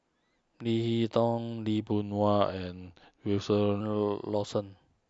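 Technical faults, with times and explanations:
1.92 to 3.81 s, wrong sample rate: this stretch plays back about 8% slow and roughly a semitone and a half low, which fits audio captured at 24 kHz being clocked out at 22 kHz.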